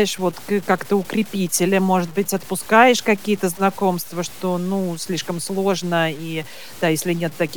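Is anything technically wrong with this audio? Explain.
Yes. Throughout the speech there is grainy distortion that shifts with the sound. Low bit depth without dither is the likely cause. The texture fits 7-bit truncation, with error roughly 25 dB under the signal. Quiet passages turn gritty and sputter near silence.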